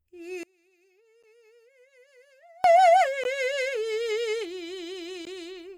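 From 0.43 to 2.64 s, one stereo channel is likely inverted in polarity, so when the channels are summed to mono the shared centre material cancels. The music drops by about 32 dB, leaving only a faint residue of whatever differs between left and right.

Inside that stretch, at 1.23 s, and again at 3.24 s and 5.25 s, separately encoded pieces were joined without trimming the encoder's start delay and end padding. Each join leaves a brief hole in the music, about 10 ms at first and then 16 ms, recurring every 2.0 s. Each hole has smeared edges before the sound resumes where it left off.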